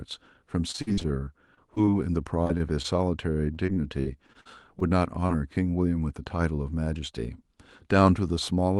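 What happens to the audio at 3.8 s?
Repeated packet loss hits the call stream from 3.54 to 4.82 s, so 3.8 s falls inside a run of eight gaps, the longest about 46 ms. Each time audio fails to arrive, the receiver fills the hole by extending the last sound it had, covering roughly 186 ms in all, around a seventh of that stretch. With holes following one another this closely, the speech turns choppy and robotic, with small pieces missing.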